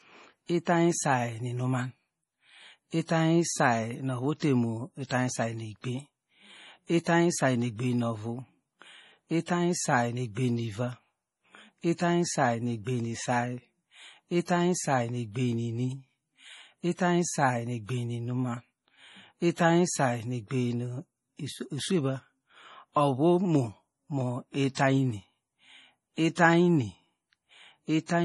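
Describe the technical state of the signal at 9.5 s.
At 9.46 s there is pre-echo: a brief hiss, about 16 ms long, arrives just ahead of the sharp onset of "isay nu egbem nuiva". The codec spreads its quantisation noise across a whole transform block, and because this attack lands late in its block, noise scaled to the loud onset leaks into the quiet moment before it, softening the attack. Unlike a click or dropout, the hiss is tied to the attack that follows rather than standing alone.

Across the same moment the audio carries MP3 compression damage. Nothing is present above 11.5 kHz, and the heavy watery, swirling texture, with faint components flickering from frame to frame, points to a low bitrate around 32 kbps. It is likely caused by the MP3 encoder running short of bits, cutting the treble and zeroing weak spectral lines. Unlike a plain low-pass filter, this loss shifts from frame to frame instead of staying steady.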